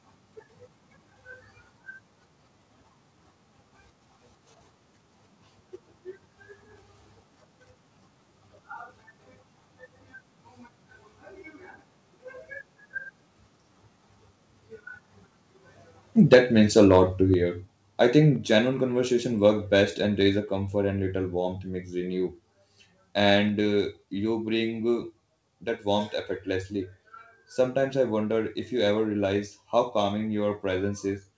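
Speech clip with microphone overload from 16.32 to 16.38 s and again from 16.77 to 17.00 s, where peaks are flattened at the converter ceiling, about 8 dB and then about 3 dB over, likely from excessive input gain, giving a harsh crackle. Microphone volume stepped down abruptly at 16.34 s by about 3 dB and at 17.34 s by about 5 dB, likely the call software reducing input gain after clipping. The call path's band limit of 8 kHz fits a G.722 codec.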